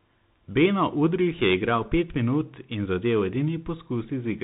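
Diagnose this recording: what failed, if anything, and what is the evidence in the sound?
Bluetooth CVSD headset codec, throughout: a codec-stage fault. The speech is cut off above 4 kHz, with scratchy s sounds and granular hiss, which fits one-bit 64 kbit/s slope tracking that lags loud high sounds.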